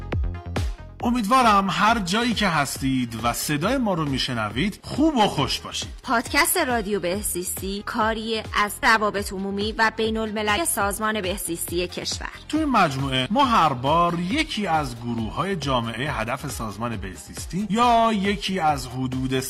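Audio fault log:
Throughout, hard clipping: the signal runs about 10 dB past what the stage can pass, so a small share of peaks, roughly one or two percent, are sliced flat. That gives crackling fuzz on loud moments, harsher and brighter than the rounded distortion of soft saturation.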